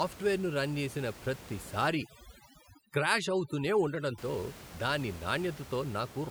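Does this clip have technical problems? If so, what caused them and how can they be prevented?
Yes. From 1.88 to 4.18 s there is overdone noise removal. A noise reduction stage was pushed too hard here. It treats any frequency band close to its noise estimate as noise and cuts it hard. The steady room noise, about 17 dB below the speech elsewhere, drops and breaks up into twinkling specks. Quiet parts of the speech are cut too. Set the noise reduction gentler, so it lowers the background rather than erasing it.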